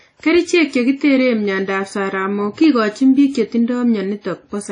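WMA compression throughout, likely: a transform codec at a low bitrate, perhaps near 32 kbps, smears quantisation noise, leaving ringing, washy speech with nothing above 10.1 kHz.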